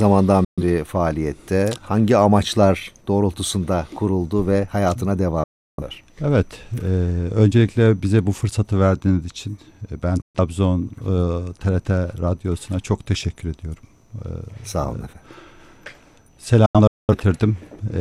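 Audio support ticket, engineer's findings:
Digital broadcast dropout, four times: 0.45–0.62 s, 5.44–5.83 s, 10.22–10.40 s, and 16.66–17.14 s as scattered holes, longest about 0.21 s. Hard mutes with a roughly 3 ms fade. Receiver muting on corrupt frames, gaps fitting whole ~43 ms frames. Audio lost, not delayed.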